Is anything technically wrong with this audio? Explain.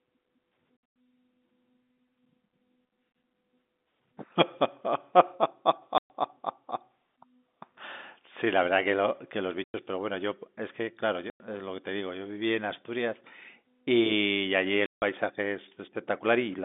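Yes. The clip suffers packet loss filled with silence: whole runs of packets never arrived, and the receiver put dead silence where they should have been instead of concealing the gap. The speech, carried over a G.711 telephone line band of roughly 200 Hz to 3.6 kHz, drops out abruptly at 5.98 to 6.10 s (120 ms), 9.64 to 9.74 s (100 ms), 11.30 to 11.40 s (100 ms) and 14.86 to 15.02 s (160 ms). Every gap is a multiple of 20 ms, which fits 20 ms packets, and each has hard edges.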